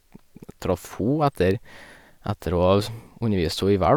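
No technical faults are audible anywhere in the recording.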